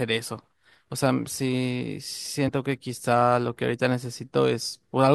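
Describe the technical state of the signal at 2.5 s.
Compressed frames were skipped at 2.47 s: whole frames went missing or were rejected by the decoder, so playback jumps ahead by about 40 ms of speech.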